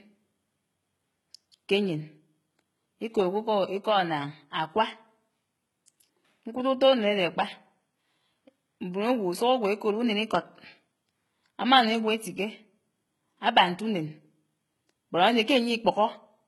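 Speech, with heavy coding damage throughout. The treble extends to about 20.5 kHz, but it sounds synthetic. S sounds come out gritty and metallic, and upper harmonics do not line up with the lower voice. This is likely HE-AAC compression. The codec keeps only the lower spectrum and rebuilds the top by copying lower bands upward under a coarse envelope. The damage fits a very low bitrate, around 16 kbps. At 1.52 s there is pre-echo. A short hiss arrives about 19 ms before a sharp attack, and the onset sounds softened. The codec spread its block's quantisation noise evenly, so noise sized for the loud attack leaked into the quiet moment before it.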